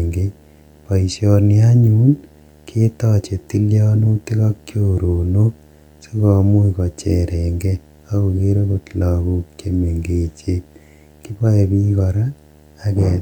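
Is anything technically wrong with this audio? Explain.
Yes. Throughout, video or display buzz from a monitor or video cable couples a 75 Hz field-rate buzz with hash, well below the speech, showing as steady horizontal spectrogram lines.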